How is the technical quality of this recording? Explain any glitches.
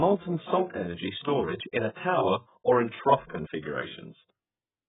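The technical quality is poor, with heavy codec damage across the whole speech clip. AAC compression, throughout: nothing is left above about 3.8 kHz, and the spectrum sounds smeared, likely from AAC-LC coding at a very low bitrate near 8 kbps. Too few bits force the encoder to drop the top band and coarsely quantise the rest, so speech sounds dull and muffled, with a warbling, fizzy texture on sustained sounds and sibilants.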